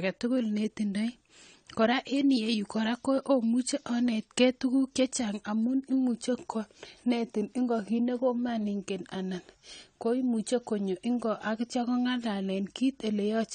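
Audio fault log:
Throughout, AAC compression: the speech stops dead at 9.1 kHz and sounds dull and smeared, likely from AAC-LC squeezed to roughly 32 kbps.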